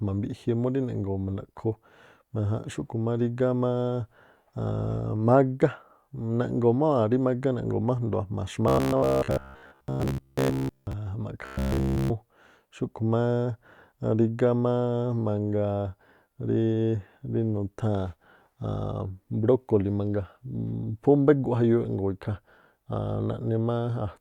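Speech with robotic sound from repeated short buffers at 8.68–10.93 s and 11.45–12.10 s: a rigid 66.8 Hz buzz, likely from a roughly 15 ms buffer looping.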